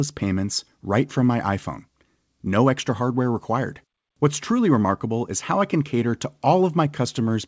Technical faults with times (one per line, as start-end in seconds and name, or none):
none